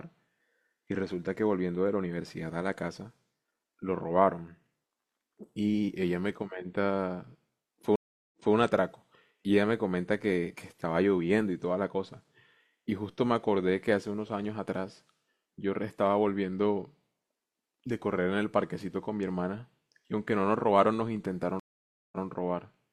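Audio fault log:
7.96–8.54 s and 21.60–22.25 s, stream reconnect: the speech cuts to silence for 0.37 s and then 0.53 s, then resumes about 213 ms and 128 ms earlier than where it stopped, so a short stretch is heard twice. The link dropped, the player reconnected, and a fresh decoder picked up from a resent burst. Unlike a simple dropout, which skips ahead or leaves a gap, the backward jump and repeated audio mark a reconnect.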